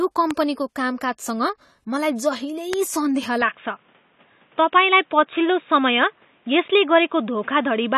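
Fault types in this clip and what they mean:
AAC compression: The speech was likely coded with AAC-LC at a low bitrate, around 32 kbps, which quantises the spectrum coarsely and discards the top band. Throughout the clip nothing reaches above 14 kHz, and the coding damage is plainly audible as a dulled, smeared texture.
Loud pop: A brief voltage spike, likely from a switching or connection glitch, was added on top of the signal. It is heard as a sharp pop about 20 ms long at 0.31 s and again at 2.73 s, peaking roughly 15 dB above the speech, which continues underneath.
Input switched to a poorer device: From 3.42 s to the end, the recording likely moved to a narrower-band input. Nothing above 3.8 kHz survives, so the speech turns boxy and muffled. There is no gap at the switch, no level jump, and a faint new noise floor about 40 dB down.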